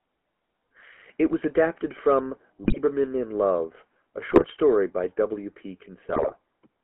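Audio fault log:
Throughout: GSM full-rate codec. The speech has a buzzy, gravelly roughness. The codec rebuilds the voice from a vocal-tract model driven by sparse, regularly spaced pulses. That thin excitation causes the grit. The band runs from 200 Hz to 3.4 kHz, consistent with 13 kbps full-rate coding.
2.64–2.77 s, 4.30–4.45 s, 6.09–6.33 s: GSM bit errors. The first burst follows "was adapted from". The second comes just before "story by". Each brings squawks, pops and gargling. Corrupted filter, pitch and gain values bend the spectrum and jolt the level, frame by frame. The last burst lasts longest.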